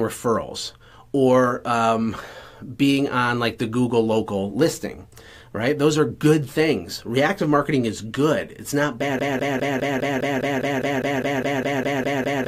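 At 9.19 s the audio locks into a broken-record loop: a fragment about 0.2 s long plays over and over, back to back and identical each time, about 16 times, until the clip ends. The stutter has a steady rhythm of roughly five repeats per second. The cause is likely a stalled player, encoder or stream that kept resending the last fragment it held, so the sound that belonged in those final seconds never arrives.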